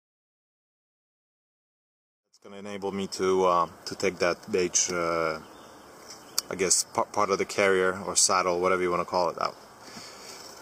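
Nothing here calls for a fix; the sound simply eases in with a smooth fade that begins around 2 seconds and reaches full level at 3.57 s, with no click or hard edge along the way.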